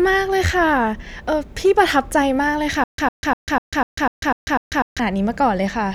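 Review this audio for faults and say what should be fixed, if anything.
Stutter with silent gaps runs from 2.84 to 5.00 s. A burst of about 104 ms plays, then about 144 ms of digital silence follows, and the cycle returns every 248 ms for eight repeats. This is likely a playback or stream stall in which each retry replays the last fragment before the buffer runs dry, so the speech that belonged in that stretch is missing. Larger playback buffering and reliable delivery ahead of the player would prevent it.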